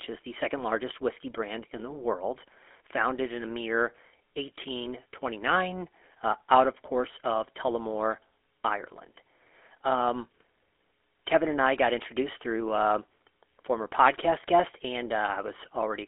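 GSM full-rate codec coding runs through the whole of this speech clip, from start to finish, and its damage is plainly audible. The codec models the vocal tract and excites it with a sparse, regularly spaced pulse train, which gives the voice a buzzy, gravelly roughness. The sound sits in a telephone band of roughly 300 Hz to 3.4 kHz, with nothing above 3.8 kHz, and the character fits the 13 kbps full-rate mode.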